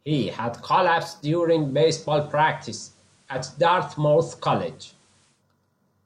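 A hybrid receiver lost its digital signal in this speech recording and made a digital radio blend to analogue: just after "had collapsed", at 1.33 s, it cross-faded over about 180 ms to the station's FM broadcast, returning at 5.44 s. While on FM, a faint hiss sits well below the speech. The level stays the same across both blends.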